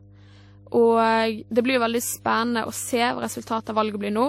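A steady 50 Hz mains hum runs under the speech from start to finish, sitting about 25 dB below it. A ground loop or nearby transformer is feeding the power line into the signal. Unlike rumble or wind, it holds one fixed pitch with some low harmonics.

Throughout, the top end stops dead at 16.4 kHz, and two different kinds of swirly, smeared artefacts sit on top of each other. The likely cause is transcoding between lossy codecs, which fits a WMA encode near 64 kbit/s followed by MP3 near 54 kbit/s. The MP3 pass spent bits re-encoding the earlier damage. A single low-bitrate encode would leave only one artefact character.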